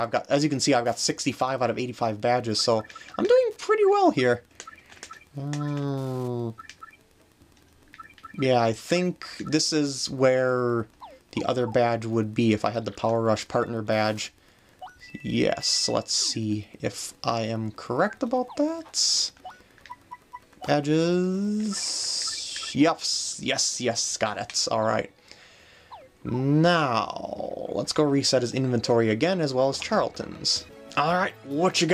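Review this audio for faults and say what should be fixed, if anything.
Wi-Fi interference runs from the start to 22.36 s: a faint, steady ticking about ten times a second, sitting well below the main sound. A nearby Wi-Fi radio's beacon, repeating every 102.4 ms, is being rectified by the audio circuit into clicks. On a spectrogram it shows as thin vertical broadband lines evenly spaced at that interval; in the waveform, tiny regular spikes are visible during quiet stretches. Keeping Wi-Fi routers and phones away from the recording chain, and using shielded, balanced cabling, would prevent it.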